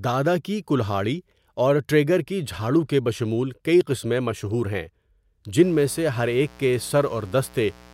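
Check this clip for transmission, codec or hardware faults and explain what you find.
One hardware fault is present: mains buzz from 5.62 s to 7.94 s, at the end of the speech clip. Sharp switching spikes, twice per 60 Hz cycle, spray harmonics up to several kHz, giving a steady raspy buzz sitting well below the speech.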